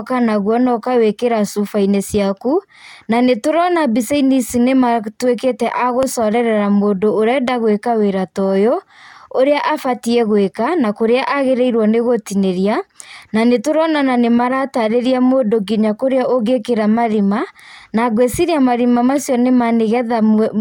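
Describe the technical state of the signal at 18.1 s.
At 18.1 s the speech signal is intact, with no technical fault to be heard at that moment.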